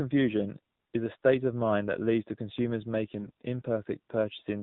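Speech that has been through the AMR narrowband mobile codec for its whole length: nothing above 4 kHz survives, and the voice has the buzzy, synthetic edge of a low-rate setting, consistent with the 7.4 kbps mode. What separates this from a plain 4 kHz low-pass or telephone band filter is that texture. A filter would only dull the sound. Here the vocal-tract model rebuilds each 20 ms frame from a few excitation pulses, so the damage is clearly audible as artificial graininess rather than simple muffling. From 3.19 to 3.42 s there are AMR bit errors. The voice keeps roughly its pitch and loudness but turns hoarse, scratchy and gargly. That points to a short run of frames with flipped bits at an error rate of several percent. Those frames passed their checksum, so the decoder played them back with misplaced pulses and wrong gain and spectral values. Packet loss sounds different: concealment would repeat or fade the sound or leave a gap, not roughen it while leaving pitch and level in place.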